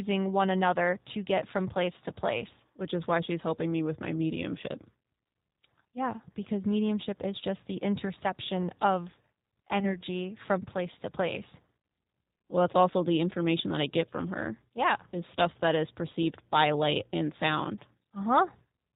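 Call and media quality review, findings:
Rough, synthetic, band-limited sound throughout, nothing above 4 kHz: G.729 codec, plainly audible damage; the sound points to 8 kbit/s pulse-based reconstruction.

Brief smear at 9.80–9.96 s, fading then slow to recover: VoIP packet loss concealed by the speech codec, consistent with one lost 10 ms frame extrapolated by the decoder.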